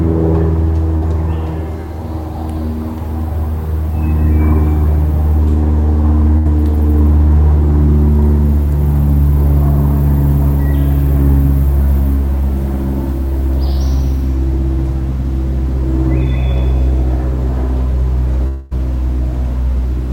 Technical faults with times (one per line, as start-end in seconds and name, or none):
0.97-1.03 short concealed packet loss
6.37-6.47 burst of packet loss
18.47-18.73 long network dropout